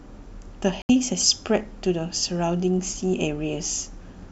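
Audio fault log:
0.82–0.90 s, digital broadcast dropout: the speech cuts abruptly to silence for roughly 70 ms, then resumes mid-flow with the intervening sound simply gone rather than smeared or delayed. The receiver stopped getting usable data, or the frames failed their error check, so it muted its output until valid frames arrived again. The length of the gap fits about three lost frames, and whatever was transmitted during that hole cannot be recovered.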